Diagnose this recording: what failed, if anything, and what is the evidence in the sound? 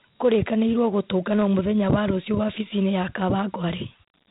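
Across the whole clip the speech carries a gritty, grainy hiss that rides on the voice, and the sound stops dead at about 3.8 kHz. That points to the codec stage: Dialogic VOX ADPCM. Each sample is stored as a 4-bit step relative to a prediction, and the coarse step sizes leave quantisation noise that tracks the speech. The band limit fits 8 kHz sampling, and the damage fits a 32 kbps stream.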